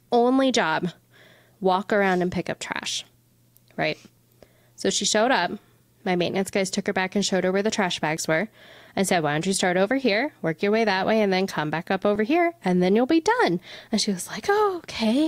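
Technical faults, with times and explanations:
4.17 s and 8.17 s, overlap between stream segments. Two tiny skips land 4 s apart, the second between "her where the trash" and "were and said". Adjoining segments claimed overlapping time. The player discarded about 16 ms, then 6 ms, of real sound, so the waveform jumps.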